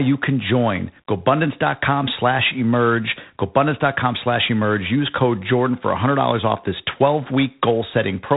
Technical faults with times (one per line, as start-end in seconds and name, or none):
0.00-8.37 G.726 ADPCM